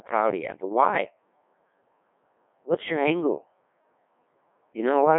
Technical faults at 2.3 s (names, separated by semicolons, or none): Codec 2 vocoder